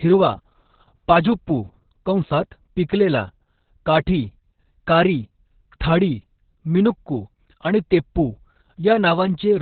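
From start to end the speech carries heavy Opus voice compression: its SILK coder, squeezed to narrowband, leaves nothing above 4.5 kHz and coarsely coded excitation, which fits a bitrate near 6 kbps. Unlike a plain low-pass filter, this sounds hoarse and faintly robotic as well as muffled.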